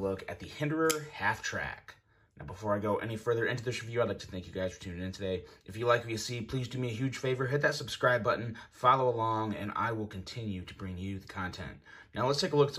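At 6.29 s a single sharp click stands out, a brief tick with no gap in the sound around it. This is likely dropped samples: only a handful went missing, a small fraction of a millisecond, so the waveform leaps straight to a later value and that sudden step produces the click.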